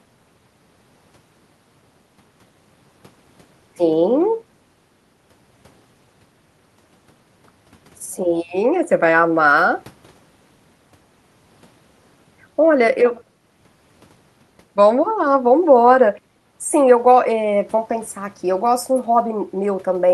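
No technical faults can be heard anywhere in the recording. The speech carries on steadily, with nothing in the signal standing out as a problem.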